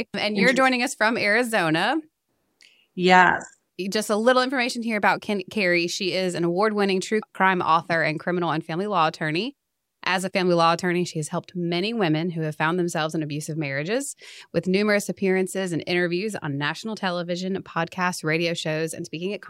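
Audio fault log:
No faults heard anywhere in the speech.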